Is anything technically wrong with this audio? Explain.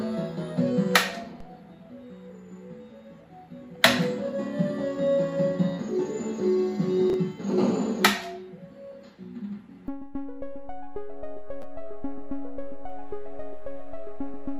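Yes, there are two kinds of fault. At 1.40 s a DC step shifts the zero line, causing a low thump. The offset then decays away at a rate that fits a 5 Hz high-pass.

Chunks play out of order at 7.10 to 7.14 s and 11.62 to 11.64 s. A 10 ms chunk arrives three chunks late, then one chunk late, giving brief jumbled moments.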